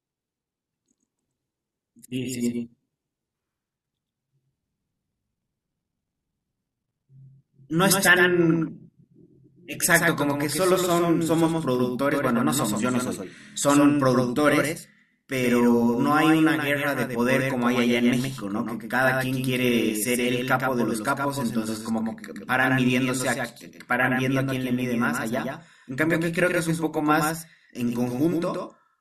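From start to end the speech carries a doubled audio track: a second full-band copy trails the original by about a tenth of a second, a little quieter, most likely because the signal is captured twice through paths of different latency. Unlike a room echo, the copy keeps one fixed delay, has no decay tail and no reverberant colour, and there is only one repeat, so every syllable sounds crisply stuttered rather than spacious.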